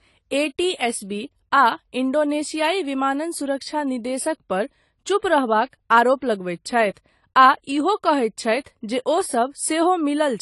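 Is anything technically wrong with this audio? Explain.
Yes. Throughout the speech, AAC compression is likely the cause. Nothing sounds above 11.5 kHz, leaving it dull and smeared, with fizzy sibilants, which fits a low bitrate around 32 kbps.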